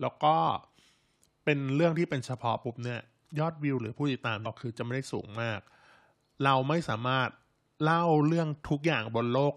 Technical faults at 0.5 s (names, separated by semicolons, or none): none